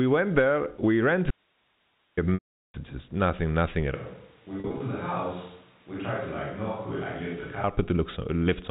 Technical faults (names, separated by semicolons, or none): audio dropout to a faint residue; packet loss with pitch repetition; switch to a distant microphone